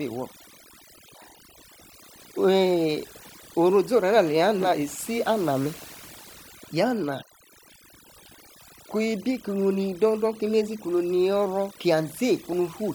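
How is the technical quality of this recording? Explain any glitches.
The technical quality suffers from overdone noise removal that runs through the whole clip. A noise reduction stage set far too aggressively cuts individual frequency bands whenever they approach the noise estimate, taking quieter parts of the speech with them. The background drops and breaks up into twinkling specks.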